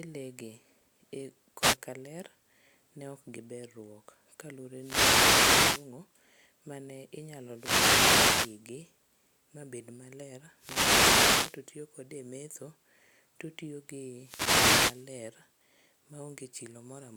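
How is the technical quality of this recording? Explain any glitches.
The speech is repeatedly broken by wireless microphone noise hits, five in all: a brief one at 1.59 to 1.77 s, then longer ones at 4.75 to 5.92 s, 7.49 to 8.63 s, 10.53 to 11.66 s and 14.11 to 15.16 s. Each is a swish of static rising over the voice as the analogue FM radio link fades through cancelling reflections and receiver noise surges. Unlike a digital dropout, the sound is buried under hiss rather than cut to silence.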